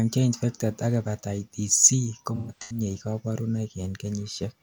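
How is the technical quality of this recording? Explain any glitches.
One glitch affects the speech: AAC frame loss with concealment, from 2.35 to 2.81 s. Across that stretch about 213 ms of coded audio is missing, spread over roughly 340 ms, which points to around five lost frames, the longest gap around 150 ms. The decoder patches each hole by reusing the last good spectrum, so the passage sounds smeared and noisy rather than cutting out. That filled-in texture sets it apart from a plain dropout, which would leave a clean silent gap.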